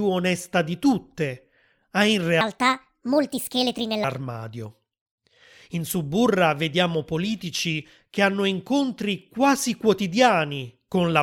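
A section at the wrong speed runs from 2.41 to 4.04 s, likely from playback clocked too fast for that stretch. The speech jumps to 1.49 times its recorded speed, so it turns hurried and rises by about seven semitones before snapping back.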